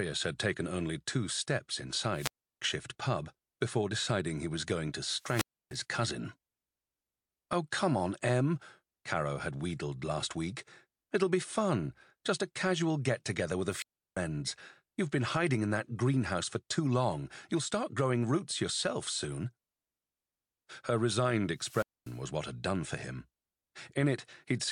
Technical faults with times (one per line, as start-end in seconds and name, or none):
2.14-2.62 wireless microphone squelch dropout
5.17-5.78 wireless microphone squelch dropout
13.68-14.17 wireless microphone squelch dropout
21.56-22.20 wireless microphone squelch dropout